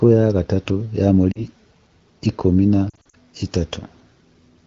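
At 1.31 to 1.46 s, lost AMR speech frames cause a brief warble as the decoder fills about 40 ms of corrupted frames by repeating the last good pitch and vocal tract settings at falling gain. At 2.89 to 3.15 s, about 140 ms of losses scattered over 240 ms, in runs no longer than 40 ms, make the speech stutter and thin. On a spectrogram, harmonics smear flat and dim. The waveform shows shrinking, repetitive cycles.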